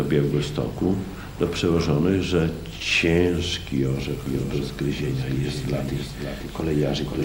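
From 4.26 s to the end, a doubled audio track appears: a full-band copy trails about half a second behind, roughly 5 dB quieter, likely from a second, slower capture path.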